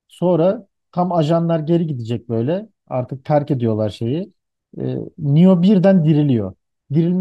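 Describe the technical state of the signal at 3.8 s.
The signal at 3.8 s is intact, with no dropout, distortion, glitch or other fault present at that moment.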